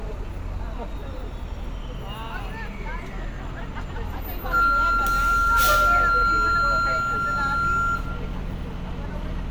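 No technical faults can be heard anywhere in this recording of sounds. At no point does anything in the audio stand out as a recording or playback problem.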